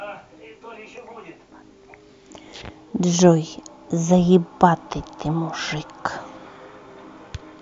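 Nothing here trips a technical alarm; the speech comes through without any fault worth pointing at.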